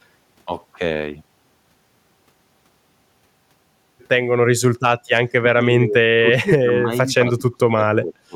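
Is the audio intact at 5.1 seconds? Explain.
No. At 5.1 seconds the speech is caught in speech suppressed in double talk, which runs from 5.06 to 6.02 s. The speech dips sharply, by about 25 dB at its deepest. Most of that span is affected, roughly 0.7 s in total. The likely cause is an echo canceller meeting both sides talking at once. It could not tell the near talker from loudspeaker echo, so it turned both down.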